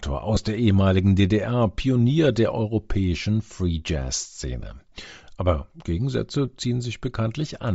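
A speech recording that was most likely carried over Bluetooth LE Audio with LC3 compression, its transform coder running at a low bitrate; the grainy, breathy edge and noise-filled upper band are plainly audible throughout, consistent with roughly 32 kbps and 7.5 ms frames. These are lost LE Audio frames: around 0.35 to 0.37 s, about 15 ms (two frames' worth) went missing, and at 4.61 s another 7.5 ms gap occurred. The decoder repeated the previous spectrum with scrambled signs, leaving brief noisy smears instead of clean speech.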